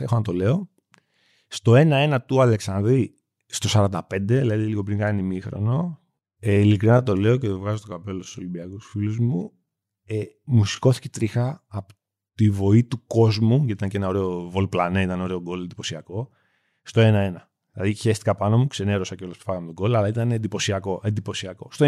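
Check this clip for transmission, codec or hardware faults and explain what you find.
One fault is audible: a time-stretched section from 4.91 to 10.81 s. Software likely slowed this passage to 0.74 times its speed to fill a set length, repeating short slices while holding pitch, so the speech abruptly drags without lowering in pitch.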